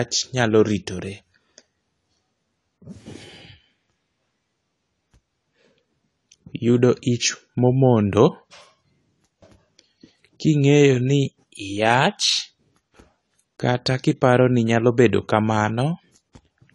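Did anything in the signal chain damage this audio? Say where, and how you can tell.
Yes. The damage sits at the codec stage, running through the whole speech clip: the sound is dull and smeared, with a fizzy, warbling edge on sibilants and held vowels, likely from AAC compression of the AAC-LC kind. On a spectrogram, energy stops at a hard shelf near 11.5 kHz. Dropping high frequencies and coarsely quantising the rest like this fits a bitrate around 32 kbps.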